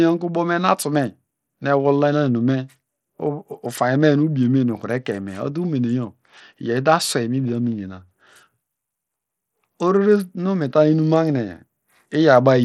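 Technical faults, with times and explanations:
Throughout: Bluetooth SBC compression. The speech carries a gritty, grainy noise and has nothing above 13.2 kHz, the likely result of SBC coding with a small bit pool, which fits a low bitrate around 80 kbps, starving the top sub-bands and coarsely quantising the rest.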